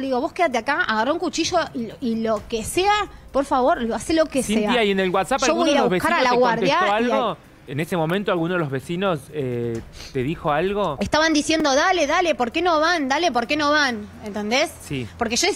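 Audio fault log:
7.91 s and 11.60 s: repeated buffer. A tiny segment, fitting a roughly 5 ms buffer, replays twice then once when fresh audio arrives late, heard as a brief click-buzz; the waveform shows identical short cycles with hard step joins, the spectrogram a thin vertical broadband stripe.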